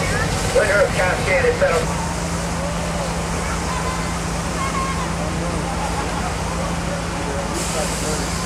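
Nothing in the signal points to a technical fault: level, continuity and timing hold steady throughout the audio, with no audible interruption or damage to the sound.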